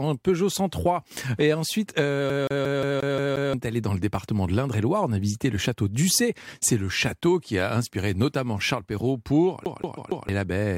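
From 2.30 to 3.53 s the speech gets caught in a CD stuck on one turn. A scratch keeps knocking the laser back one track, so the same 177 ms slice plays seven times in a rapid, even stutter, with a tiny mute at each jump, before it moves on into "est allé dans le". On a spectrogram this shows as an identical block of harmonics tiled at regular 177 ms intervals, each copy separated by a thin vertical gap. The waveform shows a repeating envelope. The fault returns from 9.65 to 10.29 s with the same 177 ms loop, this time repeating four times.

Inside that second loop, at 9.96 s, compressed frames are skipped. The decoder never plays a short run of frames, roughly three of the 23.2 ms frames and so around 70 ms of audio, because they were missing or rejected as damaged. The sound lurches forward by that amount. A spectrogram shows a sudden discontinuity in the harmonic tracks.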